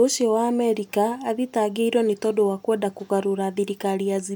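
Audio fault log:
No faults detected in the speech recording.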